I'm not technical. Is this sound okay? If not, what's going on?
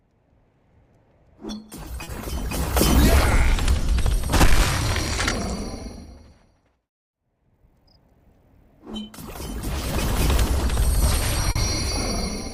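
No, not quite. There are two short glitches, at about 2.03 to 2.10 seconds and again at about 11.51 to 11.58 seconds. Each is a short concealed packet loss: around 40 milliseconds of the audio didn't arrive in time, so the receiving end guessed at the gap by stretching out the sound just before it, then eased back into the real audio. You'll hear each as a quick smear or wobble.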